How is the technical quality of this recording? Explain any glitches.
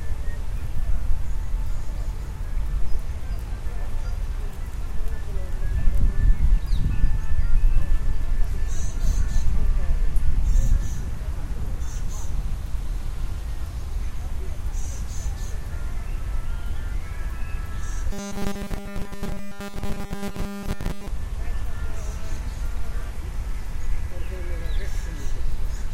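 There's one real glitch here. From 18.12 to 21.08 s the sound turns robotic, a rigid 200 Hz buzz, likely from repeated short buffers, with a 5 ms chunk looping in place of essentially all the real audio.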